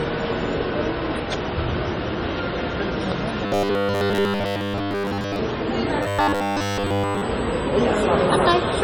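Throughout, there's heavy MP3 compression damage, likely from a low bitrate around 32 kbps. The sound turns watery and swirly.

From 3.46 to 5.39 s and again from 6.03 to 7.22 s, you get robotic sound from repeated short buffers, a rigid 100 Hz metallic buzz. That likely comes from 10 ms chunks being looped, covering most of the first stretch and essentially all of the second.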